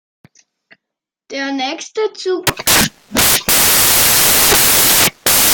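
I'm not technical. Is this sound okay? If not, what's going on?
No. From 2.47 s to the end, the speech becomes samples built from the wrong bytes. The player assembles each sound value from mismatched pieces, so tiny rapid details turn into huge swings, producing loud hiss.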